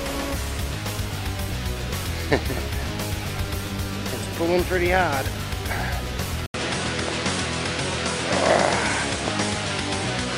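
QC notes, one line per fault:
6.46 to 10.38 s, input switched to a poorer device: an 80 ms gap, then nothing above 10.5 kHz, level shifting about 5 dB and fresh noise about 40 dB down, likely from a narrower-band microphone taking over.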